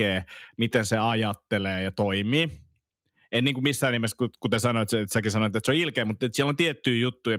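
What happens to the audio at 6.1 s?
Just after "että se on ilkeä", from 6.03 to 6.09 s, there is a lost packet rebuilt from error correction. No gap is heard. Instead, a brief stretch of speech turns rougher and noisier. About 40 ms of audio was rebuilt, which fits two lost 20 ms packets. Each packet that arrived next carried a low-bitrate backup copy of the missing one. The decoder played those coarse copies in place of the originals, so the sound continues but loses detail for that moment.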